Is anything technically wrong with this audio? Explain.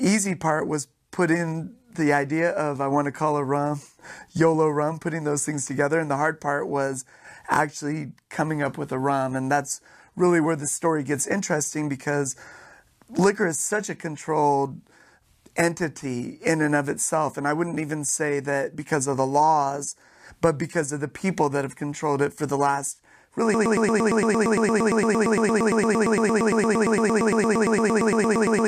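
Yes. A broken-record loop begins at 23.54 s, right after "for the last really", and runs to the end of the clip. A fragment about 0.11 s long repeats exactly, back to back, roughly 45 times, giving a rapid stutter instead of continuing speech. The player or stream likely stalled and kept resending the last piece it held, so whatever should have followed those words is lost.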